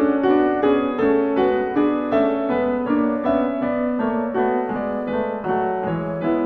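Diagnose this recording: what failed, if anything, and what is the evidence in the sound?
The music plays twice throughout, an identical, equally loud copy trailing about a second behind. This doubled audio track likely comes from a second, slower capture path mixing in.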